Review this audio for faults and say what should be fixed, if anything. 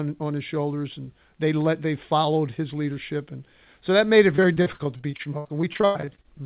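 Repeated packet loss (robotic sound) runs from 4.36 s to 6.26 s, just after "so that made it". Some twenty short gaps, the longest about 99 ms, are patched by stretching the preceding sound, so about a third of that stretch is filled in and comes out choppy and robotic. The audio passes through a narrowband call path with nothing above 4 kHz, which fits G.711 at 64 kbps. Larger jitter-buffer headroom or forward error correction on the lossy link would prevent the dropouts.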